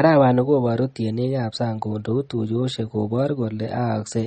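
Throughout the speech, nothing reaches above 8.4 kHz, leaving the top octave dull and the s sounds flattened, and coding damage is plainly audible from start to finish. This is likely MP3 compression at a starved bitrate, with the damage pointing to something around 32 kbps. Short of bits, the encoder cuts the treble at a fixed frequency and discards weaker spectral detail it judges inaudible.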